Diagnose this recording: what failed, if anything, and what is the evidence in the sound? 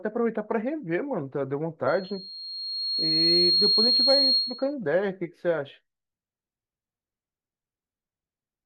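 Loudspeaker feedback squeal, from 1.87 s to 4.74 s, in the analogue acoustic path between loudspeaker and microphone. A single tone near 4.3 kHz appears under the speech and swells over about a second and a half until it sits roughly 5 dB above it, then holds until 4.74 s. The microphone was picking up the loudspeaker it fed, and at 4.3 kHz the loop gain exceeded one, so that frequency kept reinforcing itself.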